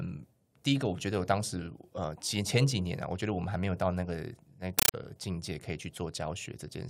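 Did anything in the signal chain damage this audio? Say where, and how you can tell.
Yes. From 4.79 to 4.94 s the speech is replaced by very loud, chattering static. This is a compressed stream played as audio, at the playback stage on the digital link. The static comes in bursts of about 9.3 ms, each followed by silence, repeating at 31.25 per second. That pattern points to an AC-3 bitstream, likely around 448 kbps, that was treated as ordinary samples instead of being decoded. Each frame's data plays as noise, and its zero padding plays as silence.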